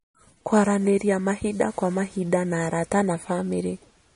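Throughout the speech, the treble stops abruptly at about 10.6 kHz, and the plainly audible codec damage gives the sound a watery, swirling texture, with chirpy, metallic edges on s sounds and softened attacks. This is likely MP3 compression at a low bitrate, consistent with roughly 40 kbps. With so few bits, the encoder discards everything above a fixed cutoff and drops weak spectral lines, which flicker in and out from frame to frame.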